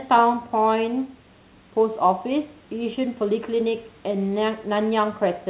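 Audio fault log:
No faults heard.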